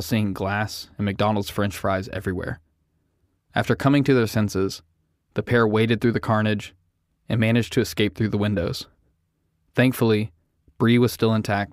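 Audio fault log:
No technical faults can be heard anywhere in this speech recording; the signal holds steady and intact across its whole duration.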